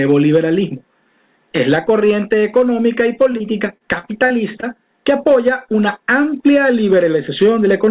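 Repeated packet loss (robotic sound) runs from 3.32 to 4.65 s. Around seven short holes open in quick succession, the longest about 49 ms. Each is patched by stretching the preceding sound, so the passage turns choppy with pieces missing, all within a narrowband band capped at 4 kHz.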